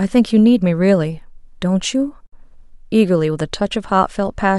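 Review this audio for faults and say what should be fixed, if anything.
At 2.27 s the speech drops out abruptly for about 59 ms, until 2.32 s, then resumes exactly where it stopped, with softened edges on either side of the hole. This is a gap at a join of encoded pieces: the audio was encoded in separate segments and butted together untrimmed, so one segment's end padding and the next segment's start-up delay survive as silence in the middle. Trim encoder delay and padding at every join, or encode the material as one continuous stream.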